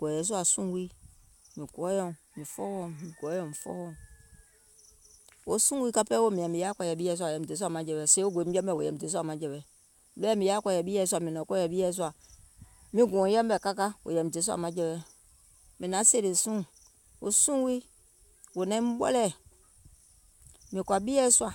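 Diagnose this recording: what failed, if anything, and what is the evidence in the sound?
Nothing stood out on listening to this speech recording that would point to a failure at any stage of the chain.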